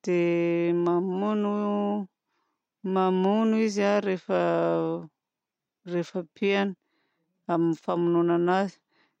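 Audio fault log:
No faults to log for this audio.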